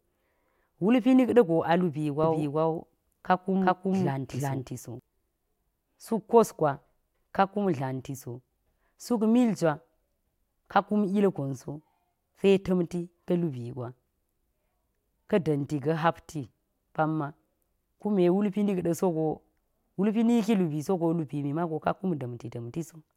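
From 2.24 s to 5.0 s the speech is heard twice. A second full-band copy runs about 0.4 s behind the original at roughly the same level. This is a doubled audio track. The copy has no decay and no room colour. It starts and stops abruptly at those times. The likely cause is the same signal being captured again through a slower path and mixed back in.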